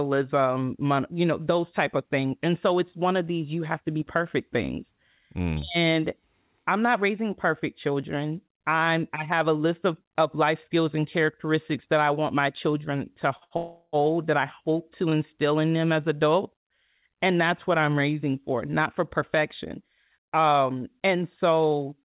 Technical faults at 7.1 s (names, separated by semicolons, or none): none